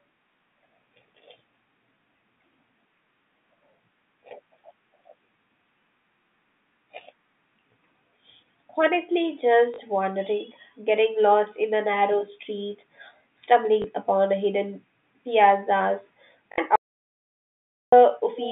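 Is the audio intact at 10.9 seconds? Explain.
Yes, at 10.9 seconds the speech is intact, carried normally through the G.711 telephone coding.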